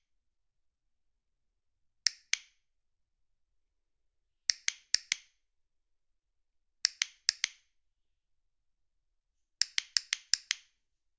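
A recording of everyday sounds, with no technical faults to report.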